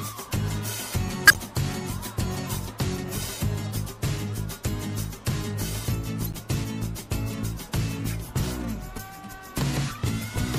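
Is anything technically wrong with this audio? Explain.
Yes. The whole clip carries plainly audible damage, most likely from MP3 compression at a low bitrate, around 64 kbps. With so few bits to spend, the encoder cuts off the treble at a fixed point and drops weaker frequency components, which then flicker on and off from frame to frame. That gives the audio a watery, swirling texture with dulled highs and metallic chirps on bright, noisy sounds, and sharp attacks come out smeared rather than crisp.

A corrupt frame was decoded from 1.27 to 1.38 s and again from 6.24 to 6.35 s. Each span covers a few compressed frames whose bits were damaged, yet the decoder played them as though valid, so misread gains and codes put energy at the wrong frequencies. The result is a brief burst of chirpy, squeaky noise lasting about a tenth of a second. The first burst is loud, at about -5 dBFS, and the second is quieter, at about -20 dBFS.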